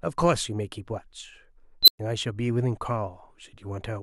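Speech, with one unstable filter fault from 1.83 to 1.99 s. A high tone around 4 kHz appears and swells hard in about 53 ms. It then clips. Then the sound drops out for about 115 ms before the audio returns. This is a recursive filter running with bad coefficients. Each pass feeds back more energy than it loses, so the output grows without limit. The numbers finally overflow and the output goes silent until the filter resets.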